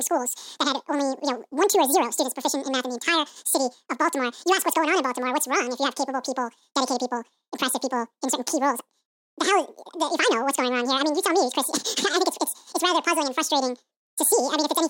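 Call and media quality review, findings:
Audio read two samples at a time (double speed), throughout the speech: playback runs 2x fast, pitch up 12 semitones. Likely a format mismatch in the decode/playback path, with sample pairs consumed as single frames.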